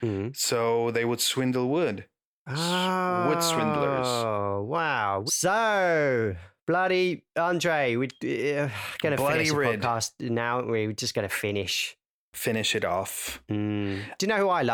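No technical faults are audible anywhere in this speech recording.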